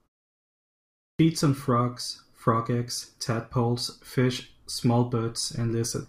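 At 0.97 s, after roughly a second of silence, the first speech arrives with a clipped start after a pause: about 222 ms of the onset, through 1.19 s, is missing. The output path appears to have idled during the silence and needed that long to wake and lock before passing audio again. Speech therefore begins abruptly, without its initial sounds.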